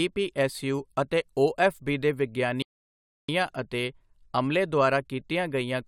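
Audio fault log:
2.62–3.29 s, rebuffering stall: right after "ਓਐੱਫਬੀ ਦੇ" the speech drops to silence for 0.66 s, then picks up exactly where it left off, since playback starved waiting for data.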